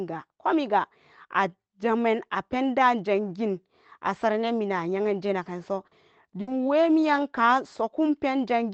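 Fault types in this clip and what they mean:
Short concealed packet loss: At about 5.87 s, shortly after "yeanje naganso", some 40 ms of the call failed to arrive in time. The decoder covered the hole by extending the sound just before it, then merged back into the real audio. It comes across as a quick smear or wobble rather than silence. Whatever fell inside those 40 ms is gone, and a brief consonant there could simply drop out.
Burst of packet loss: Around 6.41 to 6.49 s, again after "yeanje naganso", roughly 60 ms went missing as a run of lost audio. The receiver kept the last sound going and let it fade as the gap lengthened. You hear a short held buzz or dying hiss, then the speech picks up further along. The stretch in between never plays, so the flow jumps.
Lost packet rebuilt from error correction: The last 20 ms of that burst, from about 6.47 to 6.49 s, was recovered from a low-quality spare copy carried in the next packet, a feature of the Opus codec this call runs through. 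That closes the tail of the gap with real but coarser audio. Those frames sound rougher and noisier than their surroundings, within a band that tops out near 8 kHz.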